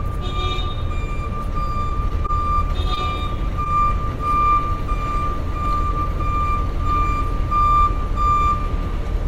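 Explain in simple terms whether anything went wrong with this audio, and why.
Two kinds of network fault can be heard here, both brief hiccups in how the audio travelled.

At 2.08 s and again at 2.26 s there is a short stall from a late packet. A piece of the audio arrived late, so the player had nothing to play and stretched the last sound by about 20 ms each time until the piece turned up. Nothing is lost. The sound is just held a moment too long, and everything after it plays a little later. That is the difference from the next fault.

At 2.94 s and 3.64 s there is short concealed packet loss. Here about 20 ms of audio never arrived at all. The player covered each gap by continuing the previous sound, for about 19 ms at the first spot and about 10 ms at the second, then blended back into the real audio. What you hear is a quick smear or wobble. Unlike the stall, a little of the original sound is actually gone rather than delayed.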